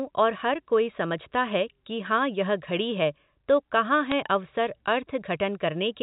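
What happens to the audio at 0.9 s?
At 0.94 s a brief burst of errors cuts across the speech, lasting only a few milliseconds before the sound carries on unchanged. These are bit errors on a digital phone line. On the G.711 mu-law telephone path, flipped bits each corrupt a single 8-bit sample. When a sign bit or high-order bit is hit, that sample jumps far from its neighbours and clicks. The burst is small, with only a tiny fraction of bits corrupted.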